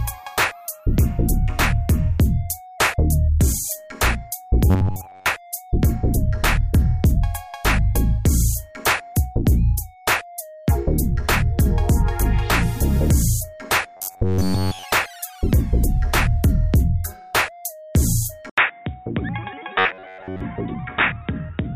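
Robotic sound from repeated short buffers appears at 4.70–5.26 s and 13.97–14.85 s. The audio turns into a rigid metallic buzz at 93.8 Hz. The likely cause is new audio arriving too late, so the software loops a chunk of about 11 ms and skips most of the real signal.

Input switched to a poorer device at 18.50 s, likely a change to a lower-grade microphone or headset. After a short 80 ms gap the sound goes dull and boxy, with a level drop of roughly 5 dB and a new noise floor well below the signal.

The same 93.8 Hz robotic buzz returns at 19.79–20.41 s, now heard through the narrower, duller input.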